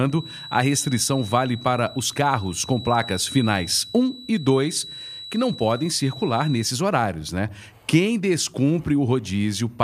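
A feedback whistle runs from 0.0 to 6.75 s, stopping just before "horários né". A thin, steady tone near 3.9 kHz sits about 15 dB below the speech, swelling and fading slowly in level. The likely cause is a loudspeaker-to-microphone loop held at the edge of feedback, ringing without running away.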